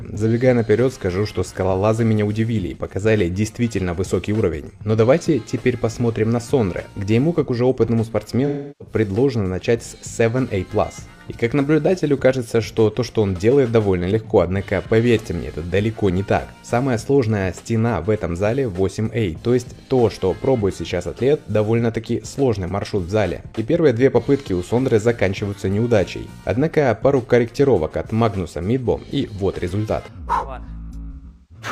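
At 8.46 s and again from 31.11 to 31.65 s, AAC frame loss with concealment breaks up the sound. In the first event about 0.34 s of data goes missing, which fits roughly eight lost frames. The decoder bridges the gap by reusing the last good spectrum, so the patch sounds smeared and noisy. The second event scatters about 0.38 s of losses over nearly half a second, with the longest run around a fifth of a second, and it sounds like a phasey patch. A plain dropout would leave a hard gap of silence instead of this spectral smearing.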